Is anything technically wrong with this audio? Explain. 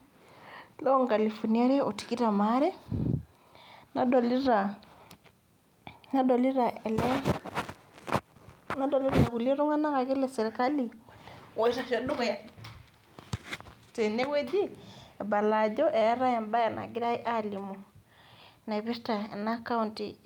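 No, nothing technically wrong can be heard in this speech recording. No problem shows up anywhere in how it was captured, processed or played back.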